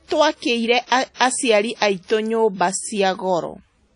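WMA compression is audible across the whole speech clip, and the likely cause is a low-bitrate Windows Media Audio encode, around 32 kbps. Nothing is left above about 10.1 kHz, so the top end sounds dull and cut off. Within the remaining band, weaker spectral detail has been zeroed and the quantisation noise is smeared over long transform blocks. The result is a clearly damaged, washy and ringing tone, with a hiss that rises and falls with the level of the speech.

Pre-echo appears at 0.86 to 0.91 s, spreading over 48 ms, and again at 2.05 to 2.09 s, over 37 ms. Both times a sharp onset falls late in a transform block. The codec spreads the noise it budgeted for the loud attack evenly across the whole block, including the quiet stretch just before it. You hear a brief hiss arriving ahead of each onset, and the attack itself sounds softened and blurred rather than crisp.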